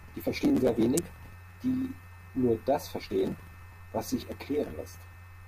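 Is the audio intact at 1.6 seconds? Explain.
Yes, the speech at 1.6 seconds is intact, with no audible fault at that moment.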